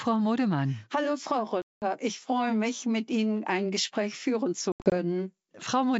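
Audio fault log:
1.62 to 1.84 s, packet loss on an ADPCM call: about 200 ms of the stream drops out as a single run and becomes hard-edged silence in the clear wideband G.722 sound. Because the decoder's predictor and step size lose sync with the sender, the returning audio comes back with brief, slight distortion.
4.72 to 4.93 s, packet loss on an ADPCM call: roughly 140 ms goes missing in scattered gaps over 200 ms, the longest about 80 ms. Each gap knocks the decoder's adaptation off track again.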